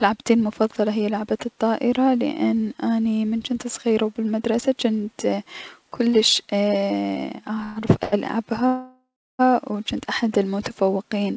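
Repeated stalls (stutter), 7.60 to 8.14 s: the jitter buffer ran dry four times, the longest gap 127 ms, so the speech drags and stammers without losing anything.

Call audio freeze, 8.66 to 9.41 s: the speech hangs for about 0.73 s, the held sound fading into roughly 0.31 s of silence, likely from packets delayed in transit, before resuming intact at "و جنت".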